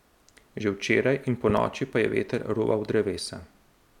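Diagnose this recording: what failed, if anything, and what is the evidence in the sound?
A loud pop, heard as two sharp pulses in quick succession, sits between 1.50 and 1.60 s, peaking about 10 dB above the speech, which carries on underneath. The fault is likely in the analogue wiring: a voltage step from a connector or switch, shaped by the circuits after it.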